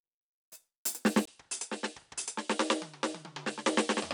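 At 1.25 s a 20 ms gap precedes quieter music, cut above 10.5 kHz, with faint new hiss: likely an input switched to a poorer device, not simple filtering.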